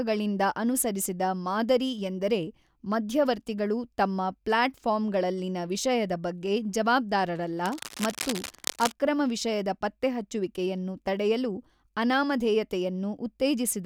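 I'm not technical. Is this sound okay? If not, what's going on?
No. From about 7.65 to 8.93 s, a burst of scratchy, rustling noise sits over the speech, fairly loud against it. That is cable scratch noise, likely from a worn cable or plug being moved so its electrical contact flickered.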